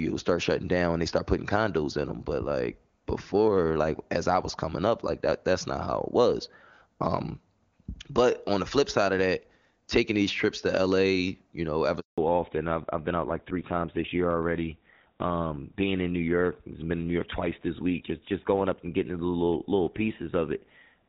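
At 12.00 s the speech drops out in a handover gap. The call moved between networks and no speech frames arrived for 180 ms. The sound fades within a few tens of milliseconds, then silence until 12.18 s. Speech in that stretch is lost.

From 12.18 s to the end there is a fallback to narrowband. Before the gap, the wideband HD Voice sound is clear and full. After it, nothing remains above 4 kHz. The speech turns duller and rougher, which fits a drop to an older codec such as GSM full rate.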